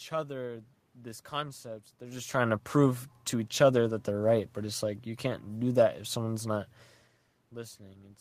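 No technical faults are present.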